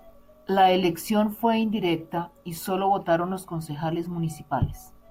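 Listening to this short speech recording, nothing stood out as a technical problem at any point.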